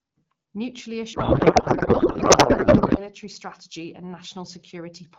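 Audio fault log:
1.13 to 3.09 s, codec payload misread: for about two seconds the speech drops out and you get garbled noise and warble that barely tracks what was being said, until things snap back just before "strategy and". That's the decoder pulling fields from the wrong bit positions in frames that still look valid. It fits octet-aligned AMR packing being read as bandwidth-efficient. Either side of the burst the AMR-WB path sounds clean at 12.65 kbit/s.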